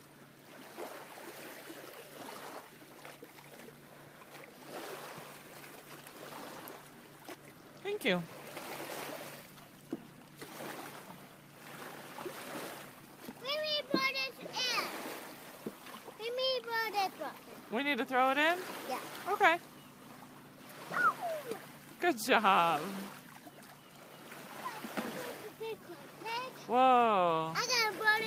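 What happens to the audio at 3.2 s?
Nothing goes wrong at 3.2 s; the audio there plays through intact, with no dropout, click, glitch or other fault.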